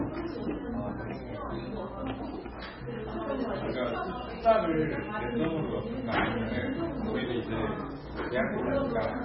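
MP3 compression, throughout: nothing above 5.5 kHz, with watery, swirling artefacts and smeared attacks. This is likely a starved encoder, consistent with roughly 16 kbps.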